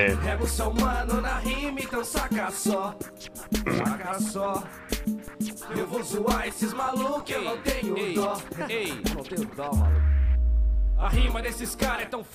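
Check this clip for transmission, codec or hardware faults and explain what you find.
Two faults are audible, both DC steps. DC step at 5.28 s and again at 7.20 s: the waveform's zero line jumps suddenly, by about -29 dBFS and then about -30 dBFS. Each offset then decays away through a 20 Hz high-pass. Each jump is heard as a short low thump while the sound carries on unchanged.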